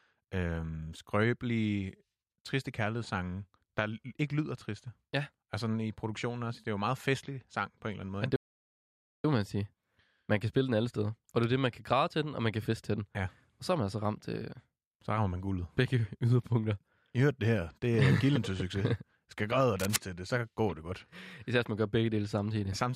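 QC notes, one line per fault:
8.36–9.24 s, playback stall: the speech drops to silence for about 0.88 s, then resumes at "må man sige"; likely the player ran short of data.
19.79–19.96 s, cable scratch noise: a rough, uneven scratching burst roughly as loud as the speech, between "græde og" and "til det så går"; likely a worn cable or connector being moved.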